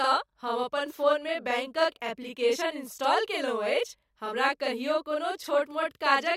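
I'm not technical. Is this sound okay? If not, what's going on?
No. Throughout the speech there's channel delay (doubling): one side of the recording arrives 40 ms late, then both are mixed together, so every sound repeats once at equal loudness. Unlike room echo, it doesn't fade away; it's one crisp copy.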